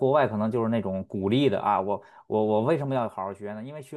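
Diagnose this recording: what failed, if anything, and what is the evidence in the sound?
Zipper noise sits in the gain stage, where a level change was applied in steps without smoothing. From 2.65 to 3.41 s the speech drops by roughly 10 dB in 1 dB steps at about ten steps a second, and each jump leaves a faint tick riding on the voice. On a waveform the envelope falls as a staircase rather than a slope. A spectrogram shows thin vertical broadband lines at each step.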